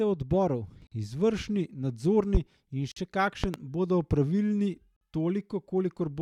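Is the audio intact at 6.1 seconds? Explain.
Yes, at 6.1 seconds the speech plays through intact, with no dropout, click, distortion or other fault to be heard at that moment.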